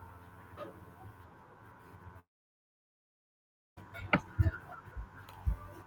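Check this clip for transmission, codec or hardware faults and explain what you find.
One fault: a long network dropout from 2.19 to 3.78 s. The last sound smears into a brief fading buzz, then about 1.5 s of near silence, likely because packets stopped arriving. The speech resumes with about 1.6 s missing, which a natural pause would not cause.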